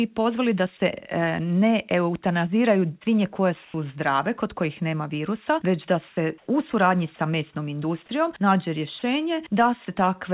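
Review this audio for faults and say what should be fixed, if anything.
Comfort noise in place of the background shows up three times, each lasting about 90 ms: 3.65–3.74 s (about 2 dB quieter), 6.08–6.17 s (about 4 dB quieter) and 6.38–6.47 s (about 3 dB louder). In each gap the real background gives way to a flat, featureless hiss, likely because the sender's discontinuous transmission stopped sending and the receiver filled in synthetic noise. Tuning the DTX hangover, or turning DTX off, would keep the real background.

Sound dropped by the voice detector happens once, at 8.99–9.02 s, where 30 ms of actual sound is swapped for comfort noise. The detector likely took that stretch for background and muted it. Lowering the detector's threshold or adding a longer hangover should stop it clipping quiet sound.

On the call path itself, nothing comes through above 4 kHz, which fits narrowband G.711 A-law at 64 kbps.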